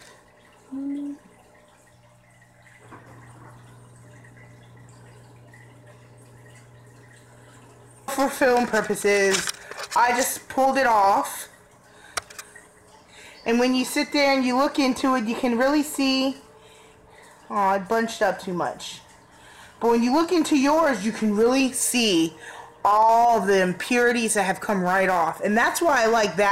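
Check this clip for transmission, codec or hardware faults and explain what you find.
There's one fault, a stream segment skipped at 8.08 s: the audio jumps ahead with a small blip, likely because one stream segment failed to load and playback carried on from the next.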